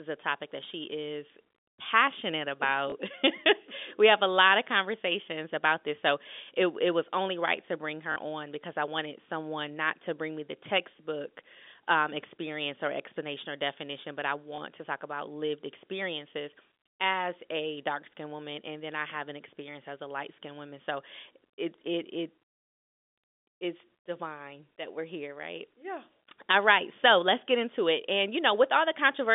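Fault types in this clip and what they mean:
Packet loss with last packet repeated, at 2.9 s just after "that she is passionate", 8.12 to 8.16 s after "only right to bring", and 14.56 s after "or definition but I": the receiver filled each gap by replaying the previous chunk of audio. The 40 ms gap at 8.12 s gives a brief robotic stutter that buzzes at about 50 Hz, which fits 20 ms packets.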